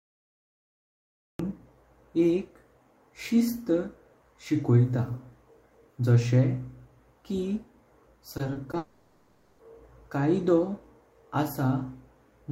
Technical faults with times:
0.00-1.39 cut-off start
8.37-8.75 repeated packet loss (robotic sound)
8.77-9.61 long network dropout

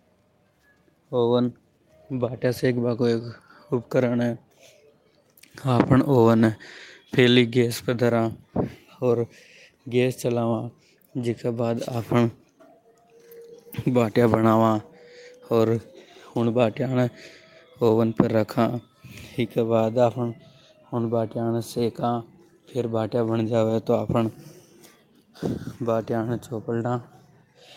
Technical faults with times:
7.91-7.93 lost packet rebuilt from error correction
23.69 lost packet rebuilt from error correction

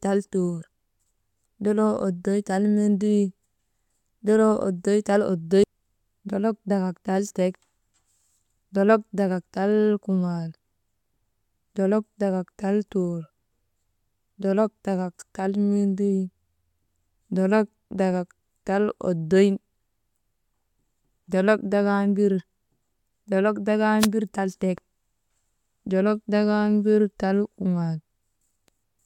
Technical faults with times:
23.99-24.08 wireless microphone noise hit

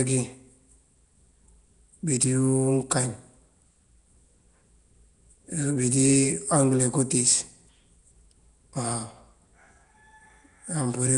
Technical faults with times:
0.00-11.17 Nellymoser compression

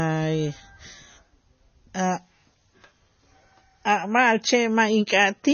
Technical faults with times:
0.00-5.53 MP3 compression

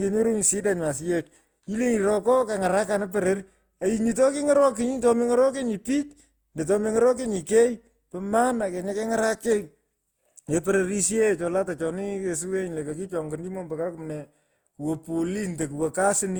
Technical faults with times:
0.00-16.39 generation loss

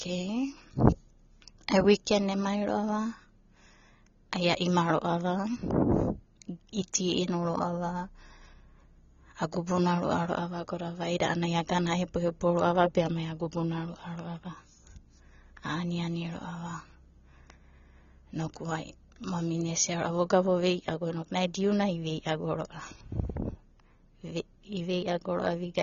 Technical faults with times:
0.00-25.82 AAC compression

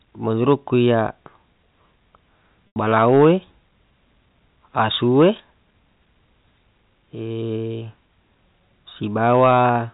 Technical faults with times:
2.67-2.76 packet loss with pitch repetition
2.90-3.30 hard clipping
9.23-9.68 hard clipping

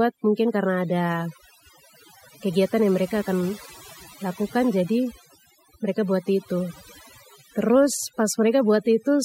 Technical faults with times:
0.00-9.24 overdone noise removal

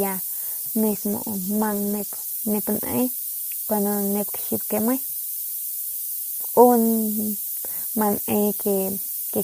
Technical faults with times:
0.00-9.43 low bit depth with noise shaping
0.93-2.33 call bitrate drop

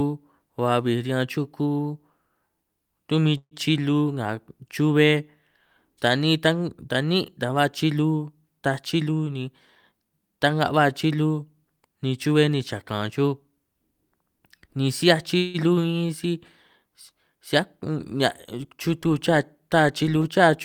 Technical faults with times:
3.37-3.54 call audio freeze
9.06-9.48 jitter buffer speed-up
9.91-10.11 jitter buffer speed-up
15.37-15.57 call audio freeze

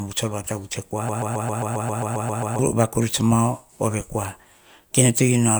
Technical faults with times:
1.09-2.59 broken-record loop

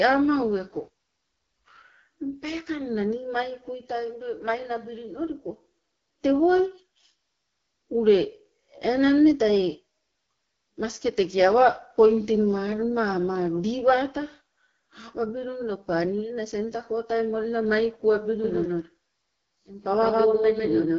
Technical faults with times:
0.00-20.99 AMR wideband (HD Voice) codec
18.44-20.99 doubled audio track

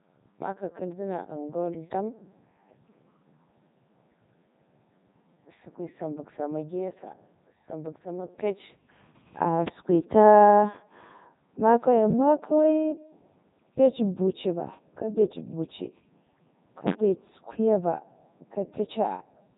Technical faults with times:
0.00-19.58 Codec 2 vocoder
16.88-16.96 loud pop

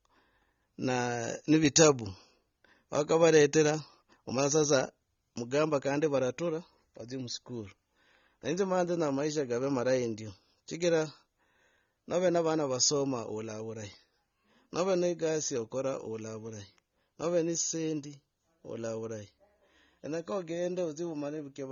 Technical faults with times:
0.00-21.71 AAC compression

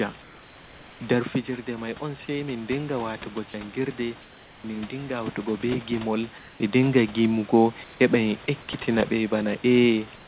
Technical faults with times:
0.22-1.00 comfort noise in place of the background
1.46-4.06 automatic gain rising
4.22-4.64 comfort noise in place of the background
6.38-6.60 comfort noise in place of the background
7.84-8.00 comfort noise in place of the background

